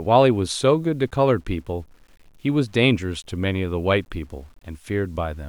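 Speech whose low bit depth without dither sounds like about 9 bits, likely truncated with no dither added. The resulting error follows the signal at roughly 40 dB below it, so quiet syllables and decaying tails turn gritty and grainy, and the faintest passages sputter or drop toward silence.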